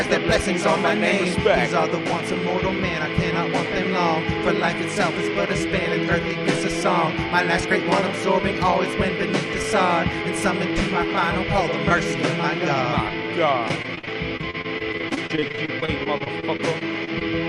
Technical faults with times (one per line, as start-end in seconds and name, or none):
13.68-17.23 repeated packet loss (robotic sound)